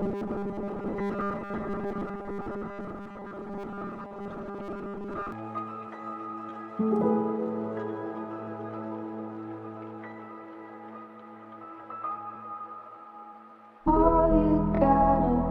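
From the very start to 5.32 s, new audio likely arrives too seldom, so the last 5 ms keeps being repeated while most of the real audio is skipped. This produces robotic sound from repeated short buffers: a rigid, metallic 200 Hz buzz.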